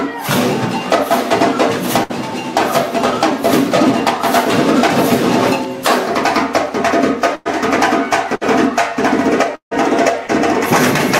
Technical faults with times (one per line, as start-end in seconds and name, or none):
2.03-2.11 burst of packet loss
7.35-7.47 burst of packet loss
8.35-8.43 burst of packet loss
9.55-9.73 long network dropout
10.27-10.30 short concealed packet loss